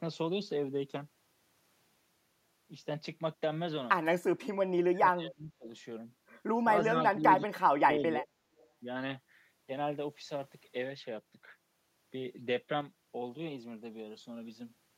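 From 4.92 to 5.68 s the speech sinks by around 25 dB. Brief dips follow at 6.87 to 6.93 s and 7.15 to 7.26 s, and a deeper cut of around 30 dB runs from 7.55 to 8.35 s. This is speech suppressed in double talk. The likely cause is an echo canceller that could not tell this talker from the loudspeaker echo while the far side was speaking, so it turned both down.

At 8.58 to 8.67 s a faint copy of earlier speech appears, trailing the original by 328 ms and sitting about 35 dB below the speech. That is an echo leak. It likely comes from a loudspeaker-side echo canceller that left a small remnant of what its microphone picked up and sent it back down the line.

At 12.81 s the level drops abruptly by about 6 dB, with speech and background noise falling together, and it stays down until the clip ends at 15 s. This is a sudden gain jump. The likely cause is a digital gain change applied between one sample and the next, with no ramp to smooth the step.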